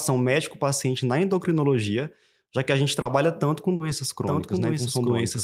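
Short concealed packet loss at 3.01–3.07 s, between "já que a gente" and "tanto com", and again at 3.76–3.82 s after "tanto com": 40 ms of audio missed the decoder and was patched by extending the preceding sound, leaving a brief smear. A doubled audio track starts abruptly at 4.21 s and runs to the end, with a dry copy about 5 dB quieter trailing roughly a second behind, likely from a second, slower capture path.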